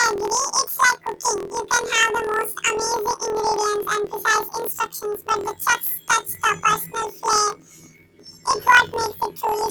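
From start to finish the speech has planar audio read as interleaved: each 24 ms block of left-then-right samples gets treated as alternating pairs, so every block plays twice at double speed, jumping an octave up with a rough buzz around 42 Hz.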